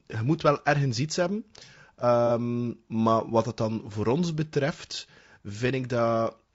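From start to finish the speech carries plainly audible low-delay AAC compression, likely AAC-ELD at a rate that fits about 32 kbps. Its short frames resolve pitch harmonics coarsely, so the voice sounds rough and grainy, with noise filling the gaps between harmonics.

From 2.27 to 2.31 s there is AAC frame loss with concealment. A gap of about 30 ms, consistent with a single lost frame, was filled by the decoder extrapolating from the preceding spectrum, producing a brief smeared, noisy patch rather than a dropout.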